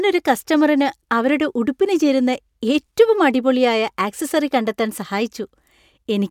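No technical faults can be heard anywhere in the speech.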